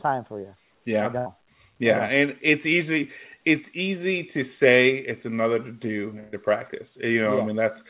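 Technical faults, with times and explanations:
1.18–1.28 s and 6.20–6.34 s, burst of packet loss: consecutive packets failed to arrive in time, so the receiver stretched the last received sound into each gap, fading it as it went. About 77 ms was filled at 1.18 s and about 126 ms just after "another to do". Speech then resumes with roughly 80 ms and 120 ms skipped. The call path's band limit at 4 kHz, consistent with G.711, is audible throughout.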